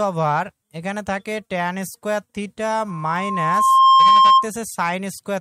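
A microphone picked up the loudspeaker it was feeding, and at 1.1 kHz the loop gain went above one: loudspeaker feedback squeal. From 2.88 s a pure tone swells over about a second to roughly 15 dB above the sound, then cuts off at 4.49 s.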